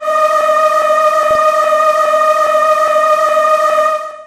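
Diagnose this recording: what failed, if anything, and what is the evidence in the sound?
Codec stage: dull, gurgling, granular sound throughout, likely MP2 compression at a rate fitting 80 kbps. The spectrogram shows upper sub-bands flickering on and off.

Reception stage: DAB burbling, as short bursts at 1.31–1.35 s and 3.72–3.79 s, where bit errors at roughly 0.2% and 0.15% corrupted sub-band data. The spectrogram shows short blips of noise in single sub-bands.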